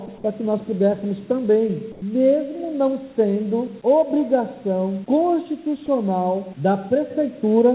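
From 1.92 to 2.02 s, 100 ms of background turns into a flat, featureless hiss about 3 dB quieter, likely comfort noise in place of the background while the sender paused transmission. A spectrogram shows the detail smoothing out below 4 kHz, and the waveform dips slightly.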